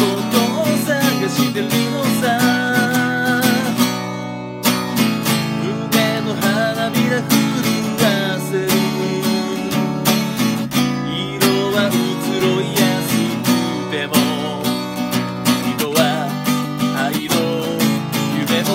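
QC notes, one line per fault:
0.20–18.73 s, word clock ticks: an unlocked receiving clock slips one sample about every 0.15 s, fitting roughly 150 ppm of drift; evenly spaced vertical spectrogram lines.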